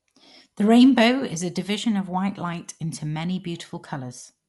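Right from the start and all the way through, the speech has that dull, clamped-off top end, with nothing above about 11.4 kHz. Around the voiced sounds there's a rough, fluttery hiss, which is what you get when an encoder runs short of bits and the decoder pads the empty frequency lines with dither noise. It's plainly audible, and the likely cause is Dolby Digital compression at a low rate, something like 64 kbps.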